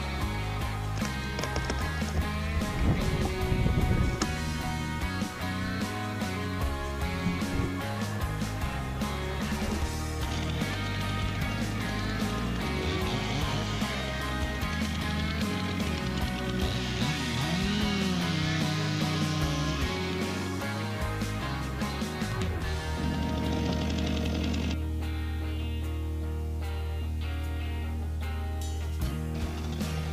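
From start to finish the sound carries a grainy, rough distortion that moves with the signal. Quiet passages turn gritty, and the faintest parts either drop out or sputter between two levels. The error sits at roughly 30 dB below the signal. The likely cause is low bit depth without dither, with the audio rounded to about 7 bits, so the quantisation error tracks the waveform instead of being spread as noise.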